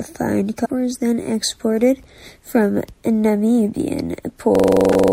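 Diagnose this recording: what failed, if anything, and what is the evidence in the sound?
Two separate failures here. First, damaged data in a compressed stream, a codec or storage problem. There's a short glitch from 0.62 to 0.66 s, just before "is then exported from", and another from 4.90 to 4.94 s. Both are about 45 ms long. Corrupted bytes make the decoder misread those frames and lose sync. It then hunts for the next valid frame header.

Second, a system hang loop at the driver or buffer stage. From 4.55 s to the end at 5.12 s, one 42.7 ms slice of audio repeats exactly, 17 times, at about 23.4 Hz. The machine froze while the sound hardware kept cycling the same ring buffer. The loop length fits a 2048-sample buffer. Around 0.7 s of real audio never made it out.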